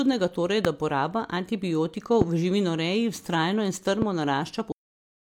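Speech, marked by three loud pops, at 0.65–0.67 s, 2.22–2.24 s and 4.02–4.04 s, each a single sharp thump standing roughly 20 dB above the voice at the first two and about 15 dB at the third. Unlike a dropout or a digital glitch, nothing is removed: the speech carries straight on beneath each pulse. That points to a sudden voltage step, likely from a connector, switch, static discharge or driver hiccup, being added to the signal and shaped by the circuitry after it. The clip then has a cut-off end at 4.72 s, where the audio stops in the middle of a sound and drops into digital silence for the remainder. A natural ending or a fade would leave some decay or room tail, but here there is none. The final stretch of audio was simply never written or played out, so the last buffers are missing rather than quietened.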